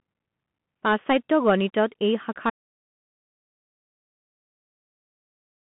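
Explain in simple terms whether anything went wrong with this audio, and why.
Two things went wrong. First, the whole recording passed through a Bluetooth CVSD headset codec, the low-quality link that hands-free headsets use for calls. It squeezes the sound into a narrow phone-like band, roughly 150 Hz to 3.4 kHz, and drops everything above 3.8 kHz. That makes the speech sound thin and muffled. The codec's crude up-or-down coding also adds a grainy hiss, turns s sounds scratchy, and distorts louder, brighter moments.

Second, at 2.50 s there is an audio dropout to silence that lasts to the end. The input feeding the recorder stopped, most likely because the headset disconnected or the link failed, and the recorder kept writing silence. The speech cuts off mid-flow and is followed by dead silence with no background sound at all. Whatever was said after that point is lost.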